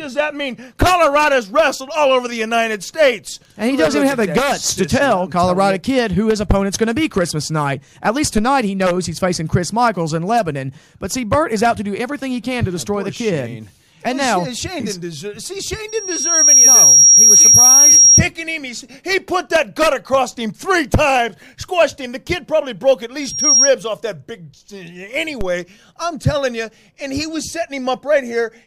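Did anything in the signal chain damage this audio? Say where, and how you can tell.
Yes. Two DC steps, at 8.38 s and 25.41 s, point to the converter or analogue input. The zero line jumps by about −12 dBFS and then relaxes as a 5 Hz high-pass drains it. Each is heard as a single low thump while the sound continues unbroken, which rules out a dropout or clipping click.

Loudspeaker feedback squeal, from the acoustic path between microphone and loudspeaker, appears from 15.88 to 18.22 s and again from 23.21 to 23.73 s. A pure 5.6 kHz tone swells by itself, over roughly 0.7 s to about 10 dB above the sound, then faster to about 5 dB above. That self-growth separates it from a steady electrical whine.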